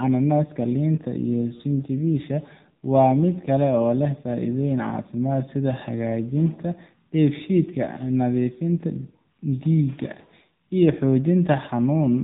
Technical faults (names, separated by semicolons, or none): AMR narrowband mobile codec; lost AMR speech frames